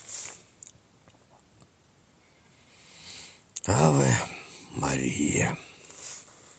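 No technical faults are audible.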